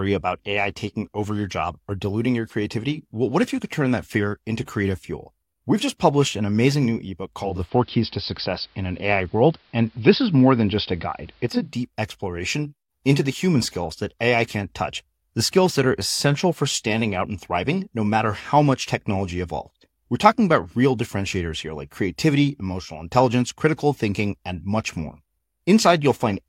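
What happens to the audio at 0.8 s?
Nothing goes wrong at 0.8 s; the speech plays through that moment intact, with no dropout, click or other fault.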